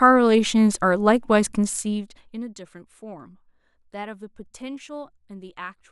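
From 1.58 s to 2.58 s the level of the speech falls by roughly 20 dB, and the fade carries zipper noise. The gain is not ramped sample by sample but updated in discrete jumps, on the order of 200 per second, each leaving a tiny discontinuity in the waveform. Strung together, those steps form a fine ticking buzz that rides on the speech while the level drops and stops once it settles.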